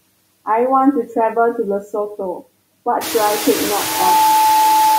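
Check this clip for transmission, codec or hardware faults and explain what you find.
Two faults are audible: noise suppressor artifacts across the whole clip, and a loudspeaker feedback squeal at the end.

Throughout, the background pumps. It drops away in the gaps and swells back under the speech. This comes from noise suppressor artifacts: a processor cuts frame by frame, by about 20 dB, whatever bands it judges to be steady noise. After the room noise rises by about 18 dB at around 3 s, the noise sits only about 8 dB below the speech. That gives the suppressor more to remove.

From 3.79 s until the clip ends, a pure tone at 871 Hz swells up over roughly a third of a second and then holds as a squeal, a little louder than the speech itself. This is loudspeaker feedback squeal: the microphone is picking up the loudspeaker it drives, and at 871 Hz the loop gain exceeds one. Each pass around the loop reinforces that single frequency until it dominates the sound.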